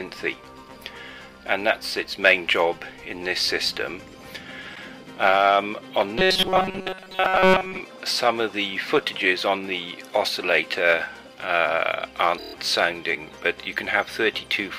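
Repeated frames at 4.74 to 4.82 s: a 78.4 ms stretch plays twice in a row, which fits a run of three compressed frames delivered again to the decoder. The result is a single stutter, and the audio runs 78.4 ms longer than it should.

Robotic sound from repeated short buffers, 6.19 to 7.81 s: the sound collapses into a stiff, metallic buzz pitched at 188 Hz that loosely tracks the underlying audio. The likely cause is new audio arriving too rarely, so the playback side loops its last tiny buffer, about 5.3 ms long, while most of the real material is lost.

Repeated frames again at 12.37 to 12.54 s: a 26.1 ms block, consistent with one frame, is heard seven times back to back. That gives a rapid machine-gun stutter and adds 156.7 ms.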